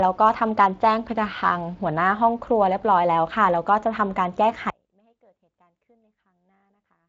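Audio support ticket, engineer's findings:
Audio dropout to a faint residue at 4.70 s, running to end of clip. Speech cuts off abruptly mid-flow, not a pause or fade. Gap holds only faint sound, about 40 dB below normal level, so the downstream path stays live. Likely cause: upstream source or feed lost while capture continued. Preceding Speex-coded speech shows light codec roughness and no content above 7.6 kHz, consistent with a wideband mode around 24 kbps.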